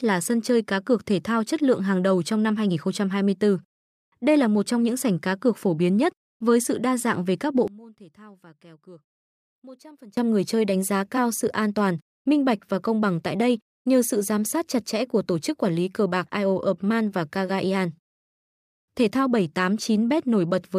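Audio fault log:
7.68–10.17 s, one channel inverted: one stereo channel likely has reversed polarity here, so when summed to mono the centred content shared by both cancels; right after "dạng về các bộ" the speech falls by about 24 dB to a faint residue.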